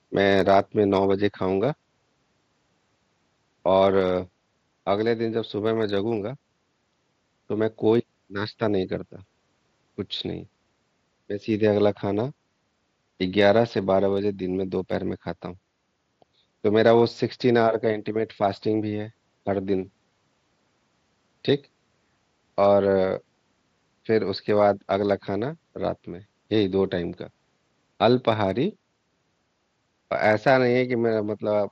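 Nothing goes wrong anywhere in this speech recording; it comes over a Bluetooth mSBC headset link doing its ordinary job, so there's no fault to walk through.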